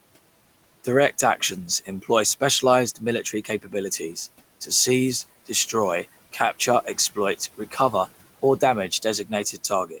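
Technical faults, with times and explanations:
3.24–3.74 s, speech cut by the noise suppressor: it mistook soft bits of speech for background and ducked them by up to about 14 dB, so they sound swallowed.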